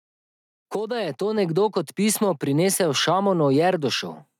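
At 1.38 s, just after "da je to", the call software judged the microphone too quiet and raised its input volume in a single step. This microphone volume step-up lifts the speech and the background together by about 5 dB, so from "nekdo kot pismo prinesel" onward everything sounds abruptly louder.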